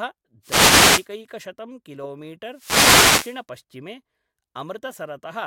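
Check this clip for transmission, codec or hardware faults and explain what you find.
Two wireless microphone noise hits, from 0.42 to 1.08 s and from 2.51 to 3.42 s. Each is a brief swish of static rising over the speech. As reflected radio paths cancel the FM microphone's signal, the receiver's own noise surges and masks the voice until reception recovers.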